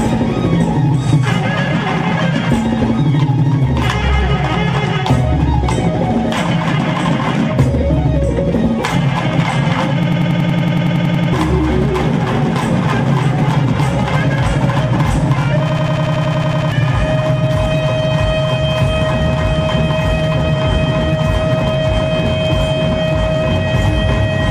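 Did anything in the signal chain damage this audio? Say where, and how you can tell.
Yes: a system hang loop at the driver/buffer stage, 10.03–11.33 s and 15.70–16.72 s, repeats one 93 ms slice at 10.8 Hz, which fits a 4096-sample ring buffer.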